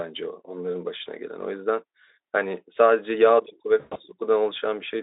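From 3.79 to 4.0 s, VoIP packet loss concealed by the speech codec interrupts the speech. About 140 ms of audio goes missing across a 160 ms stretch, and the longest run is 120 ms. The Speex decoder fills the hole by repeating its last pitch and spectral shape at falling gain, so a stretched, buzzy or noisy sound fades out instead of falling silent. That fading sound is what separates it from a hard dropout or a mute. The 20 ms steps fit about seven lost frames, and the speech stays weak for a moment after packets resume.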